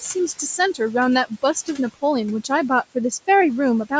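Noise suppressor artifacts run through the whole of this speech clip. The suppressor treats the steady room noise as noise and pulls those bands down frame by frame, by about 17 dB, so the background drops away in the gaps and comes back up beneath the talking. The room noise itself sits about 19 dB below the speech, and the call processing leaves nothing above 8 kHz.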